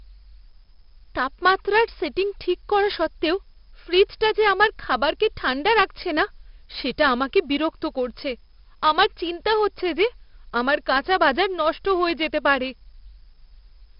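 From start to finish the speech carries heavy 4-bit ADPCM compression. Each sample is coded as a coarse step from a predicted value, so the error is a gritty hiss that rises and falls with the speech, loudest on strong syllables and harsh on sudden onsets the step size can't track. Unlike steady background noise, it vanishes in pauses, and unlike perceptual codecs it has no warbling. Nothing sounds above 5.3 kHz, consistent with a rate near 44 kbps.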